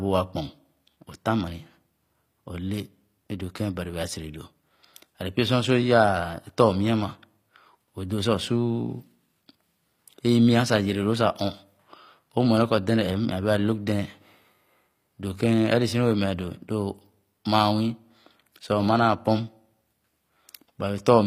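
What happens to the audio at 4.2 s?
At 4.2 s you're hearing the same thing that runs through the whole recording: the speech has the plainly audible damage of a low-bitrate codec, most likely HE-AAC compression, and a rate around 24 kbps would fit. The treble isn't the original; it's rebuilt by copying lower bands upward under a coarse envelope, so the harmonics don't line up across the crossover. S sounds come out gritty and lispy, and nothing reaches above 15.5 kHz.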